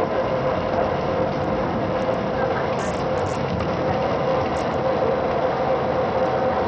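A sound recording with heavy damage throughout. The treble drops out and flickers, with gritty noise riding on top. This likely comes from Bluetooth SBC compression at a low bitrate, which fits about 64 kbps.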